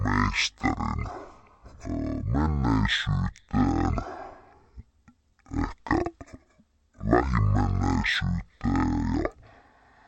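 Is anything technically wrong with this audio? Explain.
Yes. Stereo read as mono, throughout: interleaved left and right samples play back as one channel, so the speech runs at half speed and a full octave low.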